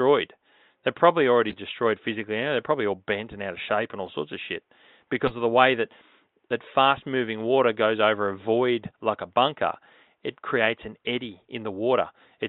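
Corrupt frame decoded at 1.49 to 1.55 s, 4.06 to 4.08 s and 5.24 to 5.35 s in this speech clip: compressed frames arrived with flipped bits and the decoder played them anyway, so misread gains and codes put energy at the wrong frequencies. Each event is a brief chirp, squeak, blip or burst of noise spanning a few damaged frames. The first peaks at about -20 dBFS, the second is fainter at about -30 dBFS, and the third is the longest and loudest at about -10 dBFS.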